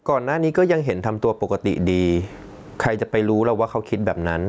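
Gain was likely set far too high, so a fast limiter clamps every loud syllable throughout. This gain pumping swings about 20 dB.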